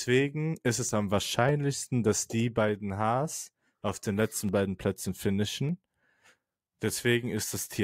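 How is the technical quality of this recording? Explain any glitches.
The recording has a recurring timing fault: clock drift buffer slips. Two devices were likely running on separate clocks, off by roughly 500 ppm, so the buffer between them drifts until around fifteen samples are dropped or repeated. From 0.29 s to 7.49 s this happens every 0.6 s, about fifteen times, heard as a steady, regular click through the speech.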